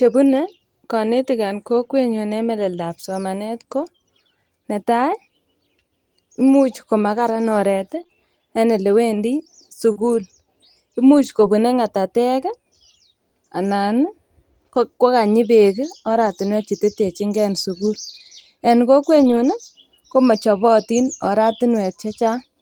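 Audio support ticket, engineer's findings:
Lost packet rebuilt from error correction at 3.71–3.85 s, 16.10–16.28 s, 17.74–18.08 s and 19.16–19.50 s. The decoder substituted low-bitrate redundant copies. The spectrogram shows rougher, noisier patches with no waveform gap.

Scattered short gaps at 8.03–11.44 s, about three, the longest around 40 ms. Jitter-buffer loss concealment extended prior sound, visible on the waveform as brief smeared repeats and ticks.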